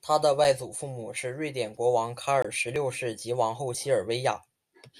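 The playback buffer was likely not filled in time at 0.44 s, leaving a block of digital silence of 5.33 ms, which fits a 256-sample buffer. The sound drops out and returns with no fade, heard as a sharp tick. At 2.42 to 2.45 s a longer 21.33 ms block, consistent with 1024 samples, opens an audible short hole.

Audio is missing between chunks at 0.78, 1.77, 2.76 and 3.75 s, likely because a recorder working in 1.0 s chunks lost about 10 ms at each changeover. The two sides are butted together without silence, so the speech skips at a steady one-second rhythm.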